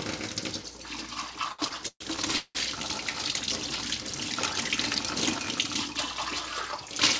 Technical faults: repeated stalls (stutter)

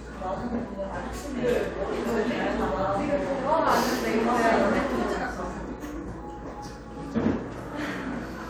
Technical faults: none

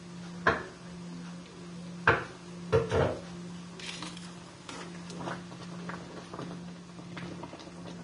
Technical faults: Vorbis compression

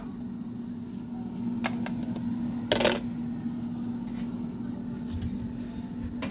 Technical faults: none

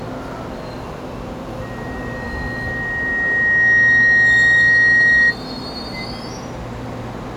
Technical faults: loudspeaker feedback squeal

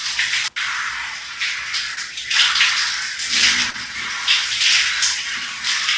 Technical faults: short concealed packet loss

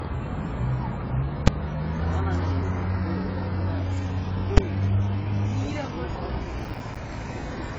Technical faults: AAC compression; invalid numbers at full scale; processor overload crackle

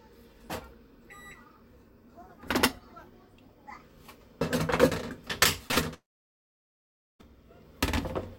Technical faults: short concealed packet loss; burst of packet loss; long network dropout

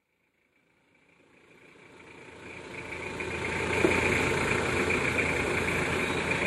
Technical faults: none

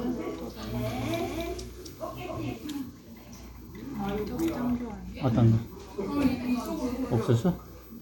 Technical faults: doubled audio track

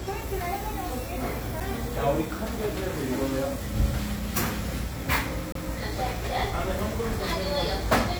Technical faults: CD skip

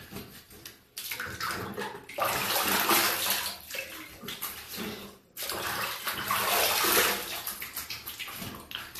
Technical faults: transcoding between lossy codecs

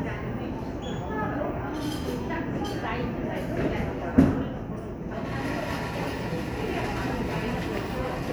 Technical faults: none

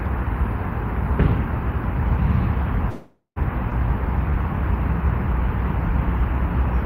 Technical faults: call audio freeze; skip ahead

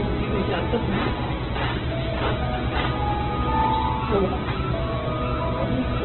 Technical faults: Opus compression

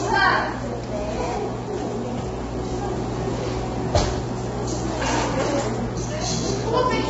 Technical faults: low-delay AAC compression

